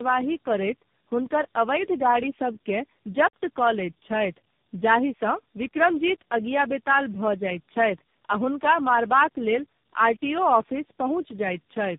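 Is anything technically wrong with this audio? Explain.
Yes. Tandem speech coding runs throughout: the speech passed through four codecs in a row, including AMR-NB, each re-coding earlier damage, leaving it rough, muffled above 3.7 kHz, and warbly.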